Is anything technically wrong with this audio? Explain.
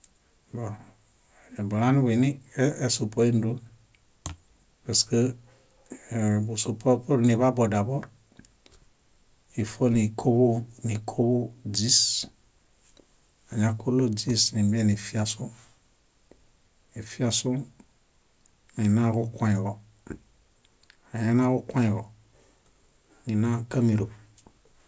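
No, nothing technically wrong stood out when listening to this recording.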